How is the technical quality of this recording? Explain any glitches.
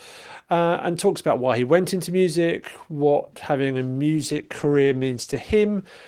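One fault is audible: a call bitrate drop. It starts at 4.17 s, just after "music what having a", and lasts to the end. The bandwidth estimate fell, so the encoder coded more coarsely. The speech turns rougher and duller, which fits a fall from 32 to 13 kbps, held at its lowest for about 1.2 s.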